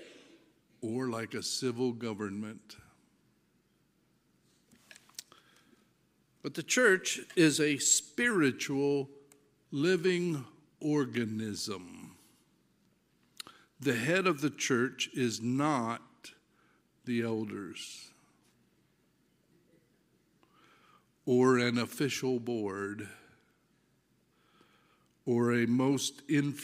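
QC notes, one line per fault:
6.51–8.31 s, drift correction step: everything suddenly runs about 5.4% fast and goes sharp by roughly 90 cents, close to a semitone, then snaps back. Likely a clock-matching stage nudging the playback rate in one jump to rebalance its buffer.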